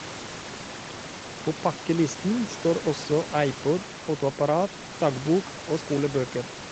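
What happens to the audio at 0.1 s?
At 0.1 s the speech comes through intact, with no fault at that moment.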